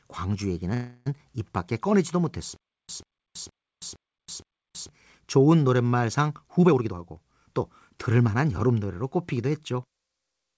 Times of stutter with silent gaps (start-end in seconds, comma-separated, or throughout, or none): 2.56-4.89